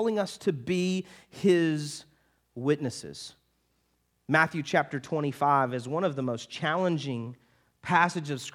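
Bluetooth SBC bit pool drop, from 4.82 s to 8.28 s: the link appears congested, so the encoder lowers its bit pool, which fits a fall from about 31 to 16, near 110 kbps. Upper sub-bands are starved and the rest coarsely quantised, so the speech turns dull and gritty until recovery.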